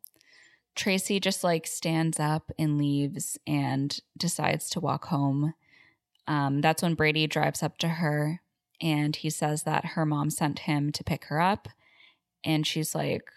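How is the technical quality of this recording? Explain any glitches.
One glitch stands out in the speech. A bit error spike at 0.88 s comes from a single flipped bit in one sample, which throws the value up to about -20 dBFS before it returns, producing one sharp broadband tick.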